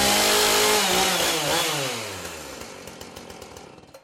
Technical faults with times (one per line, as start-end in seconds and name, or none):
none